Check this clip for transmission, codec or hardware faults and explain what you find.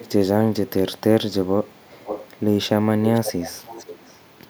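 There's an echo leak here. Faint delayed scraps at 0.0–0.1 s, 0.65–0.7 s and 0.97–1.01 s, then a much louder echo at 1.31–2.43 s and from 3.14 s to the end. The delay is 402 ms, stretching to 503 ms in the last stretch. It's likely a far-end speakerphone whose echo canceller let some of the voice back through.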